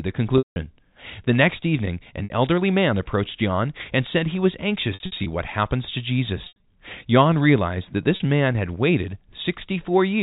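Packet loss with pitch repetition interrupts the speech at 0.38–0.56 s, 2.24–2.30 s after "next evening", 4.94–5.26 s in scattered gaps, 6.44–6.64 s after "what happens to", and 8.16–8.20 s after "realized that". Each gap is filled by repeating the last pitch period, so it sounds like a briefly held, buzzy tone that fades. A plain dropout would leave silence or a click instead. The telephone band, with nothing above 4 kHz, is audible throughout.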